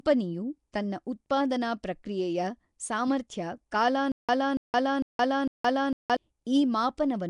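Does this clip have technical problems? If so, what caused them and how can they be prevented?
Yes. Throughout the clip the speech has a rough, hissy halo and a smeared, underwater quality, and nothing is present above 10.6 kHz. This is likely Nellymoser compression, Flash's microphone codec, at a rate that points to about 44 kbps. It gives weak bands no bits and fills them with noise. That noise fill is what separates it from MP3-style swirl: the hiss sits on the speech constantly rather than warbling. Recording with a modern codec such as Opus, or keeping the uncompressed source, prevents it.

From 4.12 s to 6.17 s there is a stutter with silent gaps. A 284 ms fragment plays four times at a steady 453 ms period, with 169 ms of digital silence after each. The cause is likely a stalled stream that replayed its last buffer on each retry and then ran empty, so the speech that should have filled that span is lost. 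The dead silence between repeats distinguishes it from a seamless loop glitch. Larger playback buffering and a steadier network connection prevent it.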